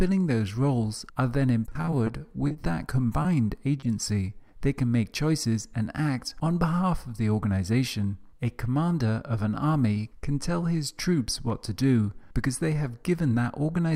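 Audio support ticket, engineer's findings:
Choppy, broken-up sound with pieces missing, 1.69 to 2.20 s. Repeated packet loss (robotic sound): five holes in the stream, longest 20 ms, 60 ms lost outright. Receiver concealment patched 80 ms by extending the preceding audio, covering about a fifth of that stretch.

Sound held too long at 2.48 to 2.53 s, nothing missing. Short stall from a late packet: arrival delay jumped 30 ms, jitter buffer drained, and the last sound was stretched 30 ms until the packet landed, then playback resumed in place.

Brief smear or wobble at 2.53 to 2.57 s, 3.23 to 3.27 s and 3.81 to 3.85 s. Short concealed packet loss at each point: 20 ms never reached the decoder in time. Loss concealment continued the prior sound across the hole, then blended back into the live stream.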